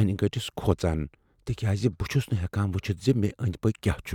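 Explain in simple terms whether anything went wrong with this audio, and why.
Nothing went wrong with this speech recording. No moment in it stands out as damaged, so there is no time to point to.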